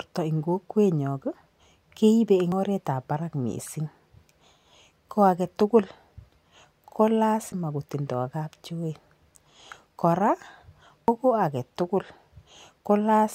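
At 2.52 s the speech jumps ahead, losing about a tenth of a second, and the same thing happens at 7.52 s with a shorter skip and at 11.08 s with something in between. There's no gap at any of them; the audio on either side just butts together. That's most likely a dropped buffer (overrun), where samples got overwritten before the software collected them, so a chunk vanished and the two sides were joined directly.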